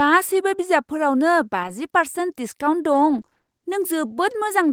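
Around 1.63 to 1.69 s there's a lost packet rebuilt from error correction. About 40 ms, consistent with two packets, is filled from low-bitrate backup copies, so there's no gap, just a brief rough, noisy patch.

From 2.93 to 3.49 s, repeated packet loss gives a choppy, robotic sound. Seven short holes, none over 20 ms, get patched by stretching the previous sound, with roughly a quarter of that span concealed.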